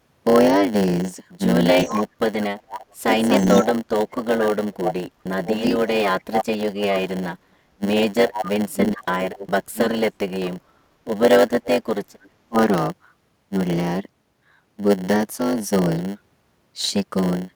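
Throughout the clip there is a block size mismatch (padded): each block is written short and topped up with zeros, so a 100 Hz buzz rides on the speech, and the speech plays at 0.919 times normal speed with about normal pitch. A waveform shows regular silent notches every 10 ms, and a spectrogram shows matching vertical stripes.

From 1.75 to 10.46 s the speech repeatedly dips or drops out, about 4 s in total and down by roughly 40 dB at worst. This is likely speech suppressed in double talk, with the echo canceller ducking the talker while the other side also speaks. The waveform shows the envelope collapsing in patches.

From 1.81 to 6.41 s, and briefly from 8.28 to 8.51 s, a copy of the speech returns 355 ms late at about 5 dB below it. This is likely an echo leak, with loudspeaker sound slipping past the canceller. On a spectrogram it appears as a shifted duplicate of the speech contours.

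From 11.66 to 12.58 s the suppression returns, covering about 0.7 s and again cutting the level by roughly 40 dB at its deepest.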